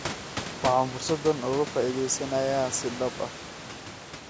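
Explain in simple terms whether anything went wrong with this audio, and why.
Nothing stood out on listening to this speech recording; the room noise behind it and the ordinary call microphone processing are normal.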